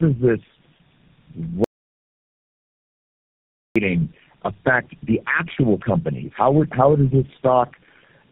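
Tandem speech coding runs throughout: the speech passed through four low-rate codecs in a row, each recoding the last one's damage, leaving it rough, muffled, warbly and empty above 3.4 kHz. From 1.64 to 3.76 s comes an audio dropout to silence, likely from lost input while zeros were written. For about 2.11 s the sound vanishes into dead silence.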